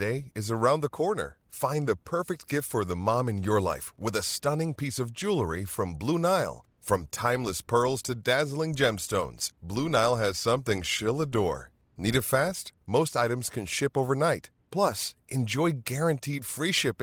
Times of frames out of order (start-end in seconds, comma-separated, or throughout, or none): none